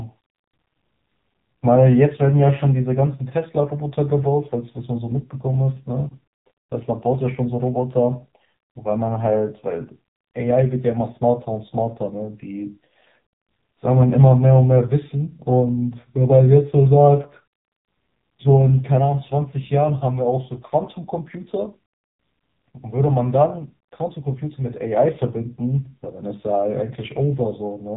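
From start to finish the speech runs through an AMR narrowband mobile codec, and it's heavily squeezed. Nothing gets past 3.8 kHz, so it's muffled and phone-like. The vocal-tract model is starved of bits, leaving a buzzy, synthetic edge that fits a low mode around 5.9 kbps.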